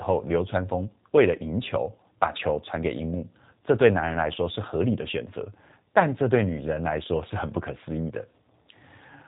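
Throughout, plainly audible G.729 codec damage makes the speech rough and synthetic, which fits 8 kbit/s G.729A coding. The spectrogram is empty above 4 kHz.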